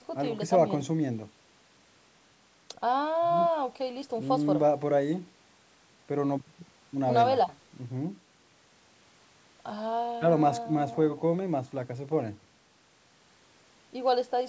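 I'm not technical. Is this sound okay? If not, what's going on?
Yes, this sounds fine; nothing is wrong.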